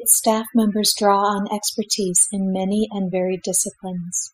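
Across the whole clip the speech carries overdone noise removal. A noise reducer was pushed too hard, so individual frequency bands near its noise estimate get pulled down or shut off, and softer parts of the voice vanish along with the noise. The background drops and breaks up into twinkling specks. A spectrogram shows scattered isolated dots between syllables and ragged, holed-out harmonics.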